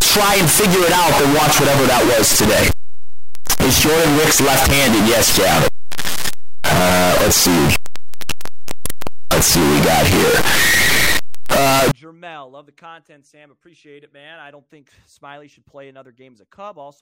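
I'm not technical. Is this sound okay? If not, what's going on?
No. From 0.0 to 11.9 s there is a float read as integer fault: the speech turns very loud, harsh and buzzy, with background noise as loud as the talking, though pitch remains audible. The cause is likely 32-bit float audio read as 32-bit integers, flattening everything into a near-square wave.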